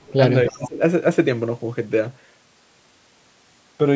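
From 0.00 to 0.24 s the speech dips by up to about 30 dB, likely speech suppressed in double talk, with the echo canceller ducking the talker; the waveform visibly collapses there. From 0.47 to 0.69 s a faint copy trails the speech by 0.30 s at about 20 dB down, likely an echo leak, appearing as weak repeated spectral streaks. From 0.51 to 0.80 s the speech is pulled down again by up to about 20 dB, likely the same double-talk suppression, leaving a shrunken envelope.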